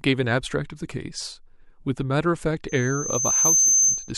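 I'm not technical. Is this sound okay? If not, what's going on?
No. Loudspeaker feedback squeal starts at 2.68 s and lasts until 4.12 s. The microphone picked up its own loudspeaker, so one high pitch, around 6.2 kHz, kept looping and growing louder, swelling over about a second into a piercing whistle over the speech.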